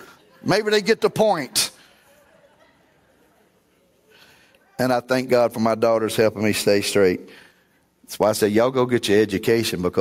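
It's a speech clip with gain pumping all the way through: the gain swings by around 10 dB, ducking whenever the voice gets loud. That's likely a mic gain cranked too high, with a fast limiter clamping down on each peak.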